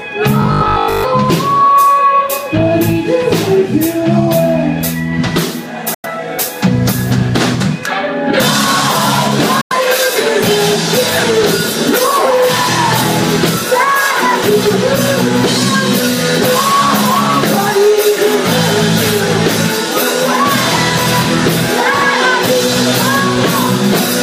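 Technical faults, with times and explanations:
0.42–1.04 s, robotic sound from repeated short buffers: The sound turns into a stiff, metallic buzz at 50 Hz, which fits a 20 ms slice being looped. The player likely ran short of fresh audio and kept replaying that slice, skipping most of the real signal.
5.94–6.06 s and 9.61–9.73 s, Bluetooth dropout: Two clean gaps of about 93 ms each. The sound comes back as though it kept playing through the silence. Each gap likely means a handful of packets reached the headphones too late and were dropped.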